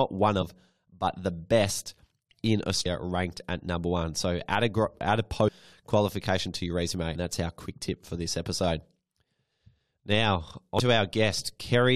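Damaged data in a compressed stream causes brief glitches at 0.41 to 0.43 s, 2.85 s after "but the best in", 5.47 to 5.49 s, 7.14 s, and 10.79 s. Each time, corrupted frames throw the decoder out of sync.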